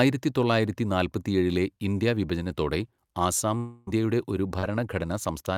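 A speech recording, and from 3.57 to 3.89 s it shows a long network dropout: roughly 0.3 s of audio never arrives, and the receiver keeps extending the last sound as a fading buzzy continuation for almost the whole gap, about 0.29 s, with no stretch of dead silence before speech resumes minus the lost part. The cause is likely a break in delivery over the network. What separates it from ordinary concealment is its length, long enough that the synthetic tail audibly decays rather than blending back invisibly. A second, much briefer fault follows from 4.59 to 4.65 s, a short concealed packet loss, where about 40 ms is missing and patched with roughly 41 ms of continued sound before cross-fading into the real signal. It comes across as a quick smear or wobble, not a decaying hold, because the gap is short enough for the fill to blend back into the real audio.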